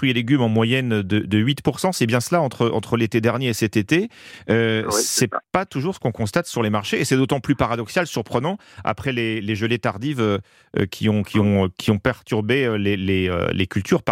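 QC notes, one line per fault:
No technical faults can be heard; the speech signal stays continuous and intact for the whole recording.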